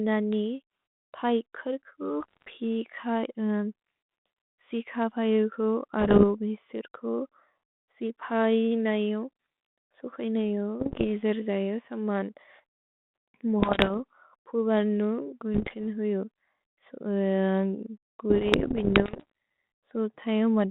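Bit errors on an ADPCM link crackle through the speech at 2.21–2.57, 6.0–6.25, 10.8–11.05, 13.6–13.92, 15.54–15.84 and 18.3–19.3 s, the last running a full second. About one or two bits in a hundred flip, and each throws off the decoder's step size and prediction, so you hear pops, rasp and brief level jumps.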